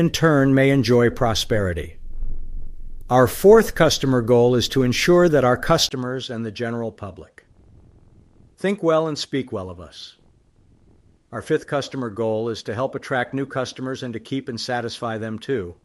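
At 5.89 s the speech drops out for a brief 20 ms gap, then returns a little quieter and duller, with nothing above 11.4 kHz and a faint new background noise sitting well beneath it. That change holds to the end of the clip. The sudden shift in tone, level and noise, with a short silence at the join, likely comes from the input switching to a poorer device, one with a narrower band and its own character.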